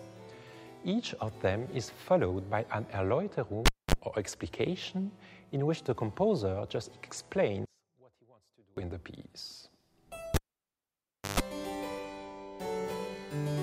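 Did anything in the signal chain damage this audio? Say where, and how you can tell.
Yes. The analogue wiring shows a cable pulled and plugged in, twice. At 3.66 s a pop is followed by near silence for about 0.24 s. Then 34 ms of 50 Hz mains buzz comes in before a second pop at 3.94 s. At 10.34 s the same thing happens for longer: about 1.0 s of dropout, 133 ms of buzz, and sound returning at 11.40 s. The buzz is the plug's tip making contact before the ground does.

From 7.65 s to 8.77 s the level falls by about 31 dB. The centre of the image nearly disappears, leaving only a faint residue. That points to a mono sum of stereo with one channel inverted, which likely happened at a mixing or playback stage. Reversed polarity on one side makes everything common to both channels cancel. Only the small left-right differences survive the sum.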